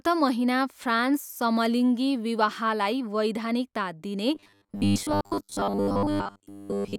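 It's a speech recording, and right after "वैधानिकता दिने", at 4.35 s, it goes robotic through to the end: a rigid metallic buzz at 100 Hz. Likely cause is repeated short buffers, about 10 ms looped over most of that stretch while real audio got skipped.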